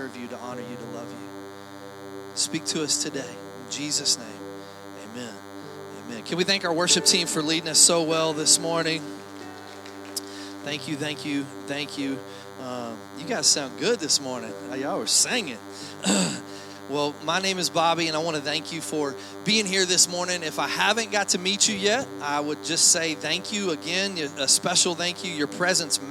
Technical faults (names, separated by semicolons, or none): DECT cordless phone buzz